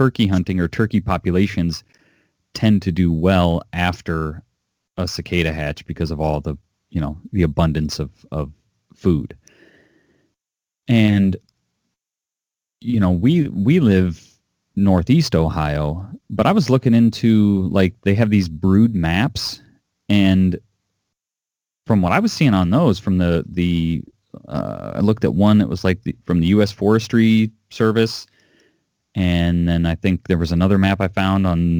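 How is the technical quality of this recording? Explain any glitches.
The recording has one fault running through the whole clip: a faint gritty fizz clings to the speech, strongest on loud and sibilant moments. This is crude rate conversion from 48 kHz to 44.1 kHz by nearest-sample picking, with no filtering. Samples are periodically dropped in a pattern set by the two rates, creating inharmonic error tones roughly 35 dB below the speech that track its level and brightness.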